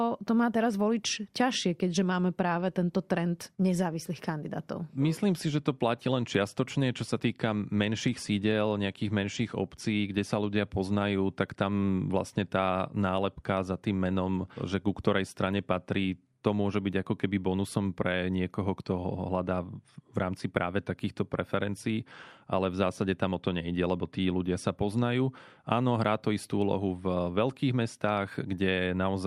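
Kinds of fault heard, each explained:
No technical faults are audible.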